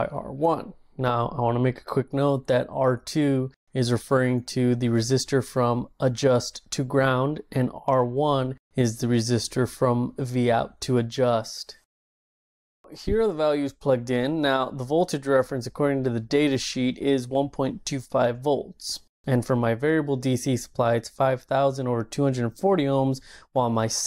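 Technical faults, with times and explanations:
No technical faults are audible anywhere in the recording.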